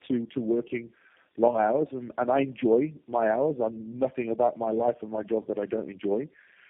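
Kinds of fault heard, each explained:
Tandem speech coding: The speech was decoded and re-encoded at each link, with every coder working on the previous coder's losses. The result sounds rough, muffled and warbly, with nothing above 3.7 kHz, from four speech codecs in series.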